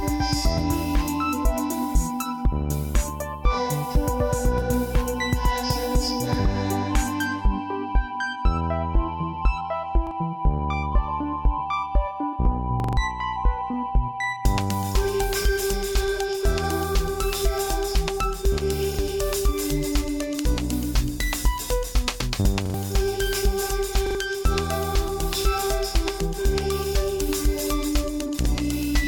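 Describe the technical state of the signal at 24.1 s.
A repeated buffer at 24.06–24.15 s: new audio arrived late, so the last 42.67 ms piece played twice more with hard joins. It is heard as a stutter, not a silent gap.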